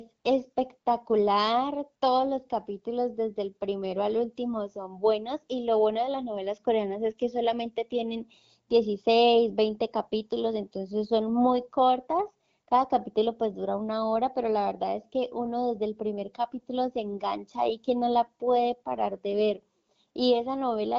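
No technical faults can be heard anywhere in the speech. It has come through the AMR wideband (HD Voice) codec, with only the light coding trace that fits its 12.65 kbit/s mode.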